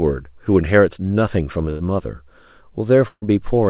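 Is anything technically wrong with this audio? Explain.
Yes. Burst of packet loss occurs at 1.70 to 1.82 s and 3.08 to 3.24 s: consecutive packets were lost or arrived too late, so the receiver stretched and faded the last sound, dropping about 100 ms and 140 ms of speech. The second gap decays into about 70 ms of silence. Throughout, the narrowband call codec leaves nothing above 4 kHz.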